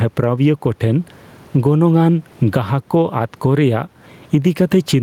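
Gain pumping runs through the whole speech clip: the room noise, normally about 41 dB below the speech, swells in each pause and ducks under every loud syllable, a swing of roughly 15 dB. The likely cause is input gain set far too high, with a fast limiter clamping each peak. The waveform looks squashed and flat-topped, and a spectrogram shows the noise floor brightening in gaps and darkening under speech.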